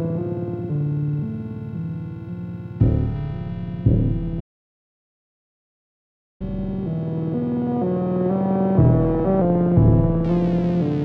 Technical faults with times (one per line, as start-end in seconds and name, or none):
4.39-6.42 playback stall
6.42-9.41 catch-up at higher speed